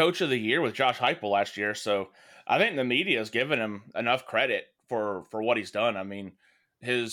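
No technical faults are audible.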